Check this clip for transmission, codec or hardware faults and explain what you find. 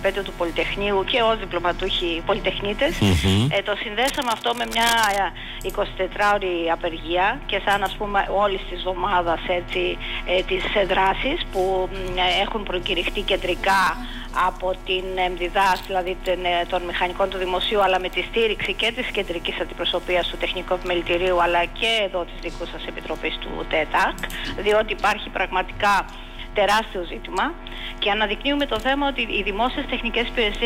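One hardware fault shows up, from 4.02 to 5.22 s: cable scratch noise. A worn cable, plug or control was likely being moved, so its contact resistance jumped about rapidly. That lays dense, irregular crackling over the sound, roughly 10 dB below it, heard as scratchy rustling.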